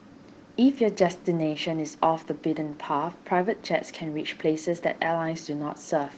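Opus voice compression colours the whole clip: coarsely coded excitation leaves the speech plainly hoarse and slightly robotic, which fits a hybrid-mode encode around 16 kbps.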